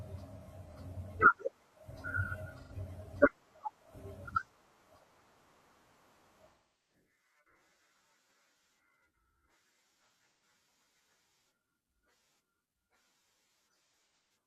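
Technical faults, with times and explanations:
0.39–0.75 s, 2.61–2.72 s, 6.50–6.94 s, 10.09–10.42 s and 13.90–14.30 s: AAC frame loss with concealment. The decoder fills each gap with a guess rebuilt from the last good spectrum, so the short losses of about 85 ms at 0.39 s and 2.61 s sound smeared and phasey. The scattered dropouts at 10.09 s and 13.90 s, with runs up to about 150 ms, sound smeared and noisy. The 384 ms loss at 6.50 s decays toward silence and fades back. On a spectrogram, harmonics blur into noise-like patches. At 6.50 s, energy tapers to a dark gap, and the waveform envelope dips and recovers.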